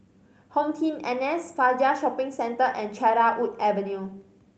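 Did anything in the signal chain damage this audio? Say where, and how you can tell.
No, nothing in the signal chain damaged this audio.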